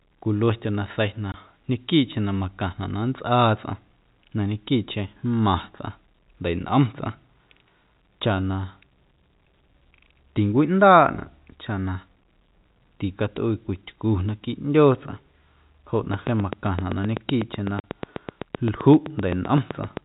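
At 1.32 to 1.34 s there's packet loss filled with silence: a 20 ms hole, about one packet's worth, dropped to dead air with hard edges. From 16.14 s to 19.98 s a train of clicks runs at a steady 7.8 per second, around thirty sharp ticks, some roughly 15 dB above the speech, likely interference or a faulty connection. Inside that stretch, at 17.80 to 17.84 s, another silence-filled loss cuts out 40 ms, which fits two lost 20 ms packets.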